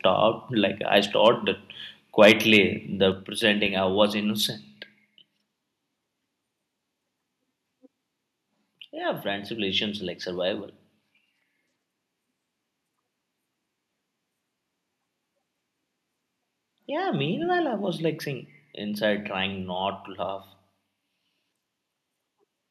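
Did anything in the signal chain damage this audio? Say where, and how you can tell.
Yes. At the converter stage there is microphone overload at 1.26–1.28 s and again from 2.21 to 2.56 s. Peak tops are flattened, giving a harsh crackle, with the second event pushing about 6 dB past full scale. The likely cause is input gain set too high.

In call processing, the microphone volume is stepped down at 3.12 s. The level of everything drops abruptly by about 4 dB just after the distorted peaks, which points to the software likely reacting to clipping by lowering the device's input gain in one move.

In the analogue wiring, a phantom power thump runs from 3.66 to 4.01 s. It is a low-frequency bump that dies away with a decay of roughly 78 ms, the mark of a supply step passing through coupling capacitors on a live input.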